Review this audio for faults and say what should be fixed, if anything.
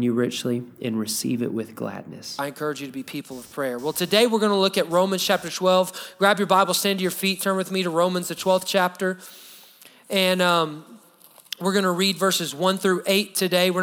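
Computer activity noise runs from 3.31 s to 8.64 s: a buzzing, chirping texture pulsing at roughly 300 Hz, sitting around 30 dB below the programme. It tracks the machine rather than the sound. Shifting current draw from the processor, graphics card or mouse disturbs the ground shared with the audio circuitry, so that activity rides into the signal path. To prevent it, isolate the audio ground with an external interface, a USB isolator or a ground-loop isolator.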